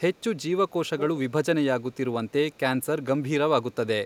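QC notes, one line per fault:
0.69–1.01 s, 2.53–2.59 s and 3.72–3.76 s, echo leak: the far end's echo canceller likely failed to strip its loudspeaker pickup, so speech returns about 0.4 s late, at roughly 15 dB down in the first stretch, only a faint trace in the two later scraps.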